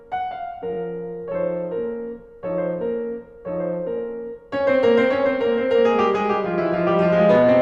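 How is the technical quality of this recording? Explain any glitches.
The recording has two kinds of fault: a pair of brief stutters in the music and a feedback squeal that takes over the last part of the clip.

Repeated frames occur at 0.72 to 0.77 s and again at 3.97 to 3.99 s. A short slice of the compressed stream was played again, which fits a single 21.3 ms frame heard twice more in the first case and once more in the second. That adds about 43 ms and 21 ms to the music. You hear a tiny rhythmic hiccup. Unlike a dropout, nothing goes missing. The music briefly stalls and then resumes.

Loudspeaker feedback squeal starts at 5.88 s and runs to the end. The microphone is picking up the speaker it feeds, and at 620 Hz the loop gain rises above one. That tone reinforces itself over roughly a second and a half until it sits about 5 dB above the music. It differs from a sustained musical note or steady hum because it is a single pitch that swells on its own.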